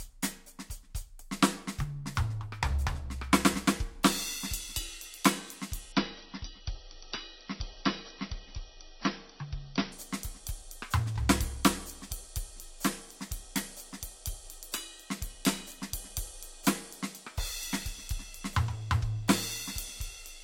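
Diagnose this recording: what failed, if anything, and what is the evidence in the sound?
The adaptive stream switched to a lower bitrate at the network stage. From 5.92 to 9.92 s the music abruptly loses its treble, which fits an MP3 stream falling from about 128 to 26 kbit/s. On a spectrogram, a hard ceiling at 5.9 kHz appears with no waveform gap.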